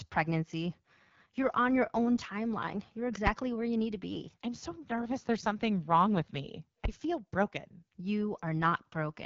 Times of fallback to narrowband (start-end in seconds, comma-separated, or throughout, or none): none